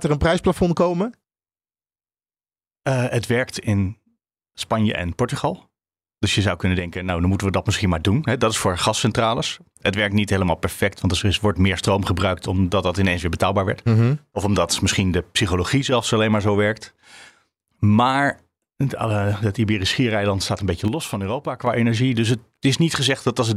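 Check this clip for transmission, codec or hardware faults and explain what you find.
Three brief level drops occur, at 6.79 to 7.09 s, 15.81 to 15.92 s and 20.88 to 21.67 s. Each is a sudden fall of about 6 dB, likely one channel dropping out before the mono sum, which appears as an abrupt step down in waveform amplitude.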